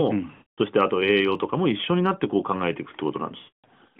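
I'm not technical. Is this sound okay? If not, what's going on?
No. Lost AMR speech frames appear twice, at 0.32 to 0.59 s and 3.38 to 3.65 s, each about a quarter-second long. Radio errors corrupted those chunks of the call, so the phone's decoder stretched out the last good sound while fading it toward silence.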